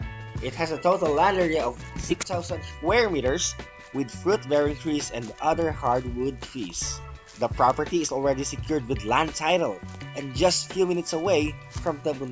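No technical faults can be heard anywhere in this recording.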